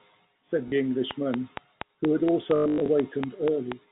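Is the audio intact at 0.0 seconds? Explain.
Yes, the audio is intact at 0.0 seconds, with only the narrowband G.711 telephone coding audible there.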